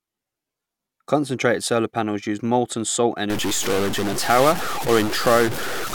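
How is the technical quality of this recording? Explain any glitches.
The recording has one clear fault, a stuck bit that sets in at 3.30 s, right after "power uses molten salt", and lasts to the end. From there the speech turns harsh and buzzy, and the pauses fill with a gritty noise floor. The likely cause is one data bit held fixed by a broken line or converter, knocking about half the samples off by a step around -20 dBFS. On a waveform the trace looks jagged and offset; a spectrogram shows broadband hash filling the gaps.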